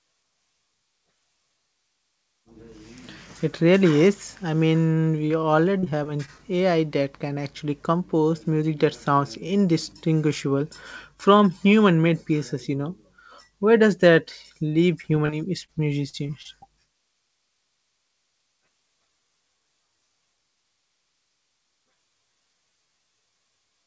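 Speech over a call link with nothing above 8 kHz, and it has two bursts of repeated packet loss (robotic sound): 5.28 to 6.41 s right after "really is I mean", and 15.02 to 16.47 s after "does that leave". Each is a string of short dropouts, the longest about 35 and 41 ms, patched by stretching the last bit of sound. That gives the choppy texture.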